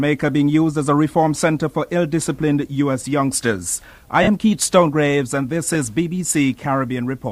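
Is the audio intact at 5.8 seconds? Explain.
No, not quite: just before that point, at about 5.74 s, there is a lost LE Audio frame, a single 7.5 ms gap consistent with one LC3 frame. The decoder filled it by repeating the previous spectrum with randomised signs, so any tonal content briefly turns into a noisy blur rather than dropping out. On a spectrogram this shows as a thin vertical smear where harmonics dissolve into noise; the waveform shows a short irregular patch with no silent gap.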